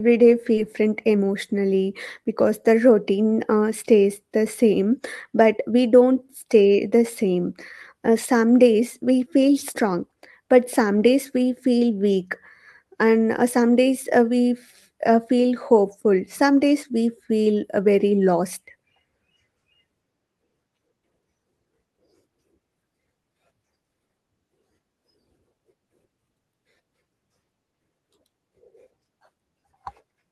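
At about 0.57 s there's a skip ahead: roughly 0.7 s of speech got dropped while later audio was queued, so it jumps forward almost seamlessly. Then from 1.14 to 1.69 s the jitter buffer speed-up kicks in, trimming tiny pitch-period slices to shed backlog, so speech runs about 10% fast at unchanged pitch.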